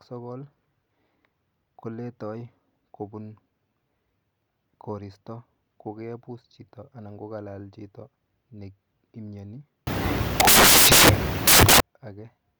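From 9.87 s to 11.80 s, the speech turns into loud, harsh broadband noise. This is samples built from the wrong bytes. For almost two seconds, the reader assembles each sample from its bytes incorrectly. The byte order may be swapped, or the read may be shifted by one byte. Either way, the rapidly changing low bits land in the most significant position. Each value becomes essentially random, so the speech is replaced by a dense hiss.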